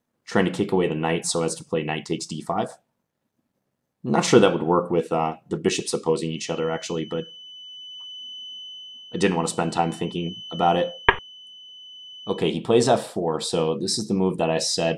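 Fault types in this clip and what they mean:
Feedback whistle: A thin, steady 3 kHz tone sits behind the sound from 6.27 to 12.50 s. It stays roughly 20 dB below the sound and swells and fades slowly in level. The likely cause is a loudspeaker-to-microphone loop held just short of runaway feedback.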